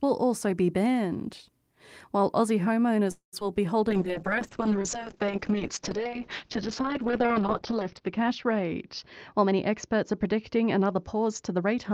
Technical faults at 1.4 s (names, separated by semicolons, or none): none